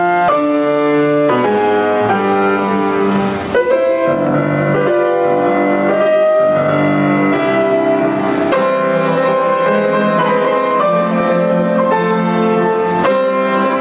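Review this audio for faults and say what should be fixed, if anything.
Gain pumping runs through the whole clip: the level is pulled down on each loud sound and recovers between them, a swing of around 15 dB, so loud and soft parts sit close together and sound squashed. The likely cause is microphone gain set far too high, driving a fast limiter or compressor on every peak. The call path's band limit, with nothing above 4 kHz, fits a G.711 mu-law codec. To prevent the pumping, lower the input gain so normal peaks stay below the limiter threshold.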